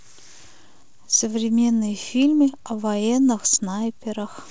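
Clock drift between sender and receiver runs through the whole clip: the sender's clock is roughly 4 percent fast, so the jitter buffer keeps overfilling. From 0.48 s to 4.49 s, repeated timing corrections trim short pieces at uneven intervals to hold that 104 percent pace, over the G.722 band ending at 8 kHz.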